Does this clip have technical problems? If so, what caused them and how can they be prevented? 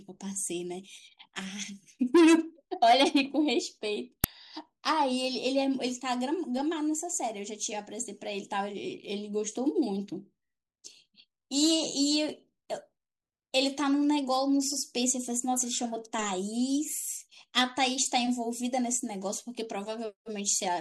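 Yes. An uninitialised buffer at 4.24 s plays leftover memory as samples, giving a loud crack about 2.67 ms long, which fits a 128-sample buffer. Prevent it by zero-filling every buffer before playback, or outputting silence until real audio has been written.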